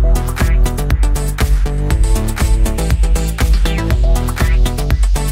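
No technical faults can be heard anywhere in the audio.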